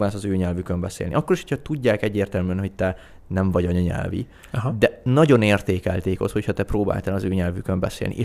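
Speech recording, no technical faults detected.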